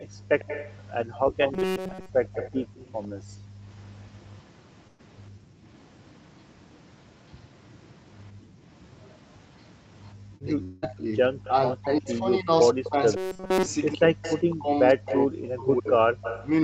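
From 0.0 to 4.36 s a delayed copy of the speech sits about 15 dB below it, trailing by 102 ms. This is likely an echo leak: a loudspeaker's output reaching the far microphone and slipping past the echo canceller. It returns from 11.44 to 12.15 s, and from 14.22 to 16.47 s at about 10 dB down.

Between 0.04 and 3.62 s the room background dips repeatedly, for about 1.5 s in total and up to about 25 dB deep. The background is being gated by the echo canceller, which pulls the microphone down while the loudspeaker plays. Shorter dips of about 28 dB follow at 5.30 to 5.63 s, 8.32 to 8.62 s and 10.14 to 10.26 s.

From 1.54 to 2.09 s the speech turns into a rigid metallic buzz at 188 Hz. This is robotic sound from repeated short buffers, likely about 5.3 ms of audio replayed in place of fresh data, roughly two thirds of the time. It recurs from 13.17 to 13.66 s, fully repeated.

At 4.87 to 5.01 s a burst of packet loss removes 120 ms. 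The receiver stretches the last sound and fades it out, then resumes further on.

From 10.45 s to the end, the speech dips and breaks up, by up to about 40 dB, likely speech suppressed in double talk. The canceller mistakes overlapping talk for echo and ducks it.

Inside that stretch, 10.63 to 10.84 s, a long network dropout, likely, loses 200 ms, bridged by a decaying buzz or hiss rather than silence.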